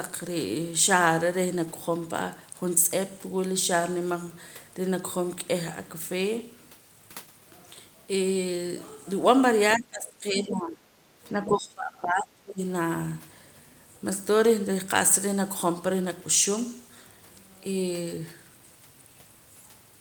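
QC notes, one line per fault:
9.77 to 10.86 s and 11.32 to 12.61 s, speech suppressed in double talk: the echo canceller likely faced both sides talking at once and could not tell the near talker from the loudspeaker echo, so it attenuated everything it picked up. The speech dips sharply in level in both spans, falling by around 20 dB at its deepest, and comes back between them before dropping again. The speech sounds pushed away and partly swallowed.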